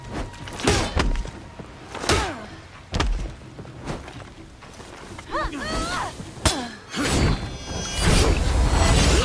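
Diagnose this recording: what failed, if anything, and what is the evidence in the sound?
Nothing here points to a failure at any stage of the chain, and I can't pick out a single moment where something went wrong.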